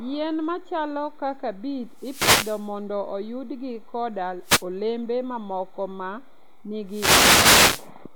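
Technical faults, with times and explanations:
1.88 to 2.77 s, wireless microphone noise hit: after "machalo kaka beet", a swish of static rises as the FM radio signal fades, then clears before "oyudgi koda olembe mamoko". The hiss swells and ebbs rather than cutting to silence like a digital dropout.
4.42 to 4.66 s, wireless microphone noise hit: a shorter burst of receiver static between "oyudgi koda" and "olembe mamoko ma", where reflected radio paths briefly cancel. It is noise breaking through, not a clean gap.
6.86 to 7.91 s, wireless microphone noise hit: a longer fade where receiver hiss builds for about a second. Its rising and falling static marks it as an FM fade rather than steady background noise.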